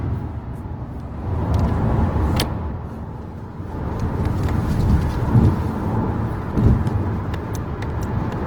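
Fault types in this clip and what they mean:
Opus compression: Tones and textures come through grainy, rough and noisy throughout, with plainly audible damage that is likely from Opus in its music mode at a low rate, near 16 kbps. Content still reaches about 20.2 kHz, and the swirly, hollow gaps of MP3 are missing.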